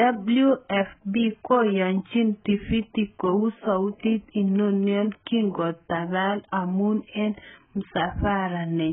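From start to finish the speech sounds dull and muffled, with nothing above about 3.7 kHz and a warbling, smeared texture on sustained sounds and sibilants. This is likely heavy AAC compression, consistent with AAC-LC at a very low bitrate near 8 kbps.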